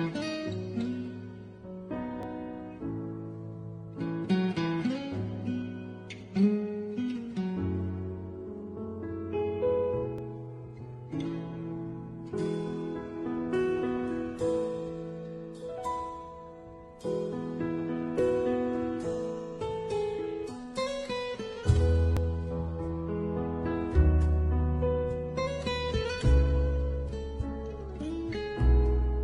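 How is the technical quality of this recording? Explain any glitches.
Five tiny skips break the recording, at 2.23, 6.21, 10.18, 18.19 and 22.17 s, each where the waveform jumps. The spacing of roughly 4 s points to overlap between stream segments: neighbouring 4-second segments carry time stamps that overlap, so the player trims the apparent duplicate even though that audio wasn't actually repeated. Between a few and about 18 milliseconds of real sound vanish at each boundary.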